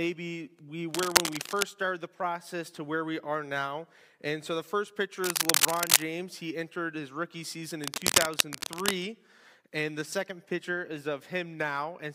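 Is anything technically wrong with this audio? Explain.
Yes, there is cable scratch noise, most likely from a worn cable or connector being moved, with contact resistance jumping erratically. Dense, ragged scratching rides over the sound from 0.94 to 1.63 s, 5.24 to 6.03 s and 7.84 to 8.91 s. It sits about 5 dB above the signal, rising to about 10 dB in the middle burst.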